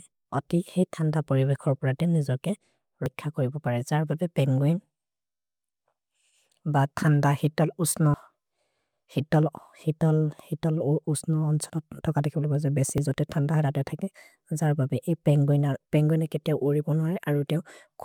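Dropped buffers (overrun) in this speech clip at 3.06, 8.14 and 12.98 s: each a point where the audio jumps ahead, losing about 40, 70 and 20 ms, likely from unread capture buffers being overwritten.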